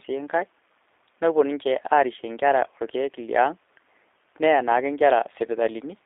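From start to finish the speech carries the sound of the G.729 codec, the A variant at 8 kbit/s, on a telephone line passing roughly 300 Hz to 3.7 kHz. Each 10 ms frame is rebuilt from a vocal tract filter, a pitch predictor and a few pulses, so the speech comes through intelligible but plainly rough and synthetic, with nothing above the band.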